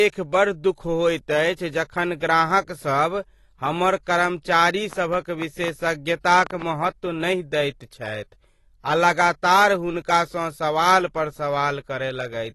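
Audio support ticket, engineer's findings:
Likely low-bitrate AAC compression, consistent with roughly 32 kbps AAC-LC. Nothing above 12 kHz, so the speech sounds dull and smeared, with plainly audible codec damage throughout.

Likely interference, or a faulty connection or power supply, injecting pulses: a train of clicks from 4.93 to 6.63 s, around ten irregular ticks, about 6 per second, about 10 dB above the signal, ending before "महत्व नहि दैत".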